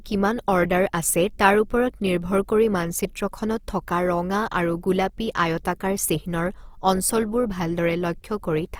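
A grainy, rough texture runs through the whole speech clip, with little swirl. This is likely Opus compression in CELT mode, fitting a 24 kbps rate.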